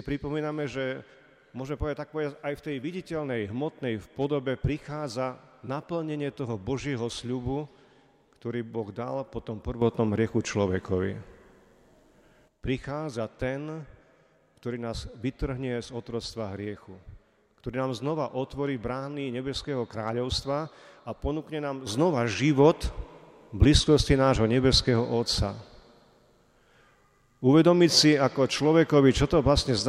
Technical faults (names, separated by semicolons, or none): sudden gain jump